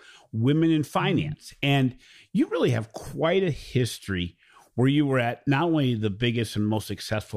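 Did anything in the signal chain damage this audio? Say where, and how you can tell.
No, nothing audible in the signal chain has damaged this speech recording; the signal stays continuous and intact throughout.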